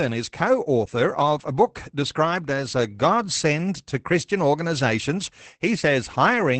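Opus voice compression runs throughout, from start to finish. The codec works in its SILK linear-prediction mode, modelling the speech as a filtered excitation and coding that excitation coarsely, which points to a rate around 12 kbps. The band is held to wideband, so nothing is heard above about 8.6 kHz. The damage is plainly audible: the speech sounds muffled, slightly hoarse and faintly robotic, with the airy top end missing.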